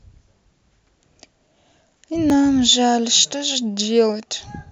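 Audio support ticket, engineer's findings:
Repeated buffer at 2.3 s: single extra playback of a 5 ms block, hard joins either side, heard as a brief click. Playback device starved, re-sent last buffer. Size fits a small output buffer.

Repeated buffer at 3.72 s: a 5 ms block played four extra times, about 20 ms of brief buzz. Same underrun mechanism, repeated. No program audio dropped; timeline stretched slightly.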